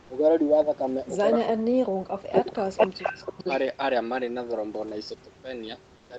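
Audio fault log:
0.01–0.09 s and 5.97–6.09 s, comfort noise in place of the background: the real room background, sitting about 31–32 dB under the loud parts, gets swapped for a flat, featureless hiss, about 2 dB quieter at the start and about 5 dB quieter at the end. That's likely Opus DTX, where the sender goes quiet in pauses and the receiver fills in synthetic noise.
1.3–3.39 s, speech suppressed in double talk: across roughly two seconds the speech dips in and out, at its worst dropping by something like 40 dB, while the far side is talking too. Likely the echo canceller couldn't tell its own talker from the loudspeaker echo and ducked both.
2.32–2.62 s and 2.78–3.59 s, echo leak: a copy of the speech comes back 446 ms late, first loud, around 5 dB above the speech itself, then about 5 dB below it. Likely a loudspeaker on the far end whose echo canceller let part of the mic pickup slip back through.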